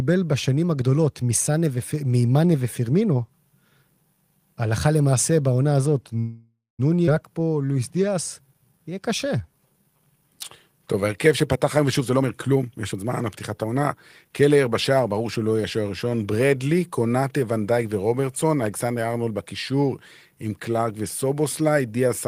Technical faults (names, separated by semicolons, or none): call audio freeze; skip ahead; jitter buffer slow-down; jitter buffer speed-up